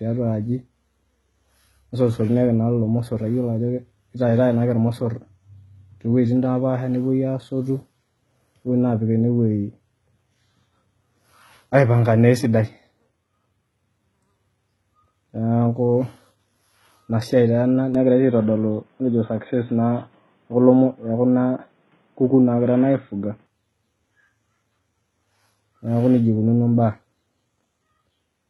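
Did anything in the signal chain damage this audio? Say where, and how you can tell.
Yes. HE-AAC compression runs through the whole speech clip, likely at the codec stage. The treble stops dead near 11.8 kHz, and s sounds come out gritty and metallic because replicated high bands don't match the real harmonics. The heavy damage fits a bitrate around 16 kbps.

From 17.95 to 23.47 s the input likely switched to a poorer device. With no gap at the switch, the speech suddenly narrows to nothing above 3.8 kHz, turning dull and boxy, with a faint new noise floor well below the speech and little change in level.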